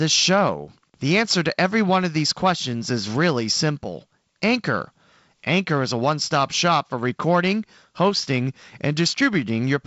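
No technical fault can be heard in this speech recording, which has the band-limited sound of G.722 wideband telephone coding, with nothing above 7.7 kHz and a faint grain consistent with the codec's 48 kbit/s mode.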